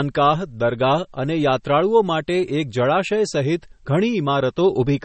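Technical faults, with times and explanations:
Throughout, MP3 compression: the encoder was likely starved of bits, which fits a bitrate near 32 kbps. It cuts everything above 8.3 kHz and switches weak frequency lines on and off between frames, leaving the speech dull, watery and swirly, with smeared attacks.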